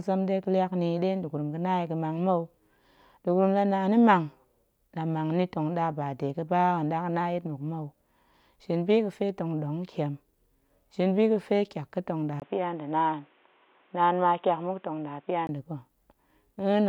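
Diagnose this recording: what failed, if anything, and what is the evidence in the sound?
At 12.40 s, right after "tyak ga̱ tong ɗa", there's a short gap of about 20 ms, and then the speech comes back dull and boxy. Nothing comes through above 3.8 kHz. The level hardly moves, and a new noise floor sits roughly 40 dB under the speech. That combination points to the likely cause: an input switched to a poorer device at the driver level, swapping to a narrower-band mic or headset profile. Full bandwidth returns at 15.49 s, just before "nda̱ ga̱".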